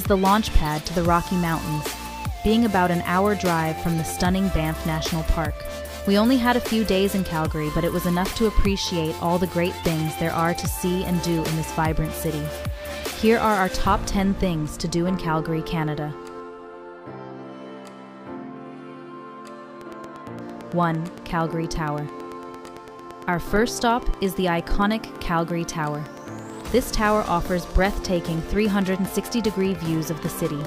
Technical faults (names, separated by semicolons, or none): train of clicks